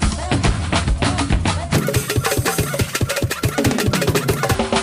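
From 1.74 s to 4.55 s the audio shows a wrong sample rate fault: it runs at twice normal speed and sits 12 semitones (a full octave) high. This fits material captured near 22 kHz being played back at 44.1 kHz without resampling.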